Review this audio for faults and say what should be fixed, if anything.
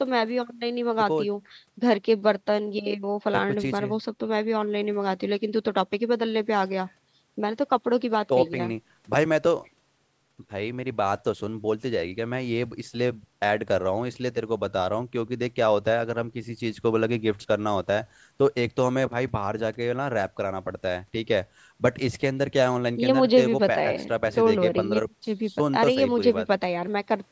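Nothing stood out on listening to this speech, so there is nothing here that needs fixing.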